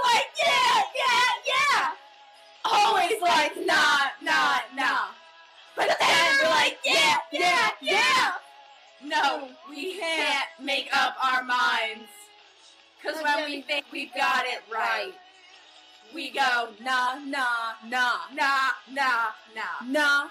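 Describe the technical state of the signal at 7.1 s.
At 7.12 s you get compressed frames skipped: the decoder jumps over roughly a tenth of a second, which fits about four frames of around 26 ms each. The audio jumps ahead at the join by the length of the missing frames.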